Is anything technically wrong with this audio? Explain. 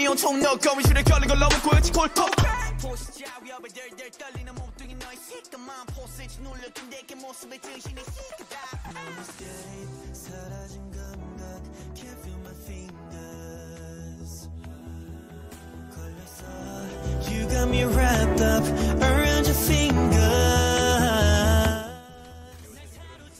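Yes. There are two kinds of fault: brief dropouts from lost LE Audio frames, and zipper noise during one level change.

Lost LE Audio frames occur at 0.42 to 0.44 s, at 2.43 s, and at 8.88 to 8.91 s. Each one sounds like a short, grainy smear where the sound blurs into noise. Bluetooth LE Audio frames went missing in transmission, about 20 ms, 10 ms and 30 ms of audio. The LC3 decoder covered each gap by repeating the last good spectrum with randomised phase signs.

Zipper noise runs from 2.31 to 3.22 s, while the level drops by about 20 dB. A fine ticking or buzzing rides on the sound as it fades. The gain was changed in around a hundred discrete steps a second with no smoothing between them, so each jump left a tiny click. The 10 ms dropout at 2.43 s falls inside this fade.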